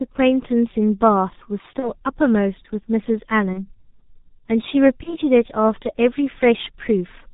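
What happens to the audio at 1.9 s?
Around 1.8 to 1.9 s there's a burst of VoIP packet loss concealed by the speech codec. Roughly 30 ms of data went missing, which fits a single lost frame. The decoder filled the hole by carrying its last pitch and filter forward at falling gain, so you hear a short buzzy or noise-like smear that fades. The sound stays weak until about 1.92 s while the decoder recovers.

All of this sits on top of heavy G.723.1 codec damage that runs through the whole clip, which fits its 6.3 kbit/s mode. Nothing above 4 kHz gets through, and the slowly updated voice model leaves the speech muffled and hoarse, with blurred consonants around the dropout too.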